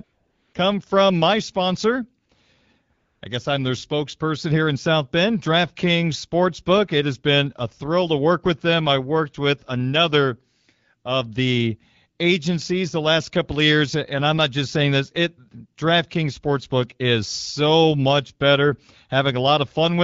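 From 0.03 to 0.53 s, before "come from my sponsor", AMR comfort noise replaces the real background: the phone's voice activity detector judged the line silent and stopped sending speech frames, so the receiver filled the gap with smooth synthetic noise built from a coarse level-and-spectrum estimate. It recurs briefly from 2.25 to 2.29 s after "come from my sponsor", and again from 2.93 to 3.21 s before "I guess I'm their", each time switching audibly in and out.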